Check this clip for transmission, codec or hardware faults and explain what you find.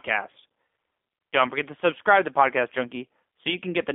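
Two faults are present: speech codec coding throughout, and one concealed packet dropout.

Throughout, G.729 codec damage is plainly audible. Rebuilt from filter, pitch and pulse parameters, the speech sounds rough and synthetic, band-limited to about 250 Hz–3.5 kHz, consistent with 8 kbit/s G.729A.

From 1.19 to 1.21 s there is VoIP packet loss concealed by the speech codec. A 20 ms gap, consistent with one lost packet, is bridged by extrapolating the previous frame, giving a brief weakened smear.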